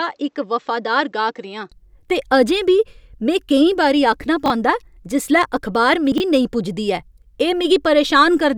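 From the start of the speech until 1.72 s, just before "ते अजें", the sound is dull and boxy, with nothing above about 7.8 kHz. It is about 5 dB quieter and has a faint noise floor of its own, roughly 50 dB down. At 1.72 s full brightness and level return at once, with no silence at the change. That points to a likely input switched to a poorer device. Unlike a fixed filter or codec limit, the band, level and noise all jump together at a single instant.

Chunks out of order occur twice. At 4.46 to 4.50 s a 20 ms piece plays one chunk late. At 6.12 to 6.20 s, right after "जिसलै अखबार", another 20 ms piece arrives three chunks late. Each spot gives a brief jumbled stutter at the hard joins. Unlike a dropout, there is no gap and nothing is missing. The same audio simply plays in the wrong sequence.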